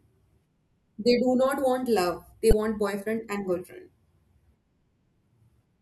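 A speech clip with one burst of damaged data in a compressed stream from 2.50 to 2.55 s, heard as a short blip just before "boyfriend and girlfriend". Corrupted bytes there made the decoder misread the frames and lose sync until it found the next valid frame header.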